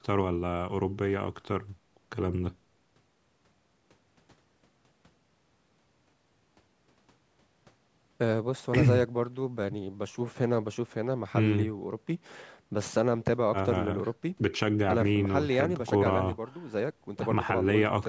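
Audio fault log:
No faults detected.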